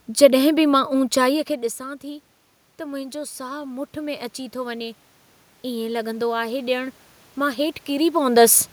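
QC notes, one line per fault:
0.73 to 5.06 s, automatic gain rising: around a second in, the talker moves away from the mic and the level falls by about 16 dB. The automatic gain control reads that as a quiet input and slowly raises its gain by about 7 dB over the next four seconds or so. Because the boost applies to everything picked up, the voice and the room noise swell up together rather than the voice alone coming back.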